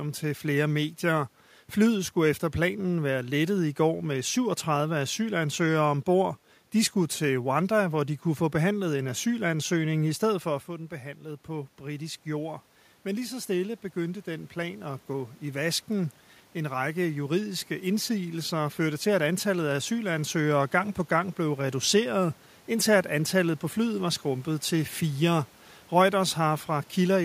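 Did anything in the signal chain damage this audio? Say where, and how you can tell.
Yes. Automatic gain rising in the call processing stage: after the talker moves away around 10.5 s and the input drops about 10 dB, gain climbs about 6 dB from 10.67 to 15.7 s. Voice and room noise swell together, visible as a slow ramp in the waveform envelope and a brightening noise floor on the spectrogram.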